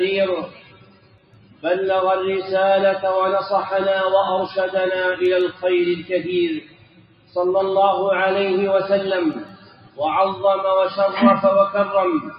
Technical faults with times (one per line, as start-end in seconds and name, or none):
0.00-12.39 noise suppressor applied to music or sounds
0.47-1.64 sound cut by the noise suppressor
6.60-7.36 sound cut by the noise suppressor
9.44-10.00 sound cut by the noise suppressor
12.23-12.39 sound cut by the noise suppressor